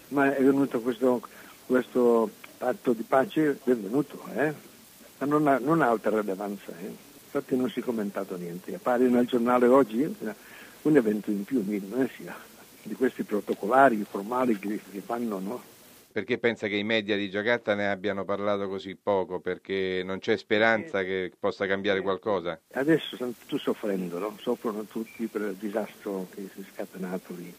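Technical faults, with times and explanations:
No technical faults can be heard anywhere in the clip. There is nothing here that needs a time or an explanation.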